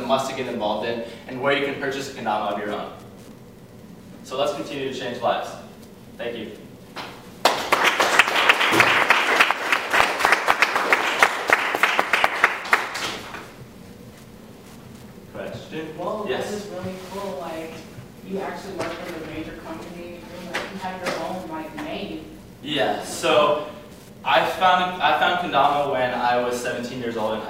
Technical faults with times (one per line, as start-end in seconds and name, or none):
0.00-27.50 Wi-Fi interference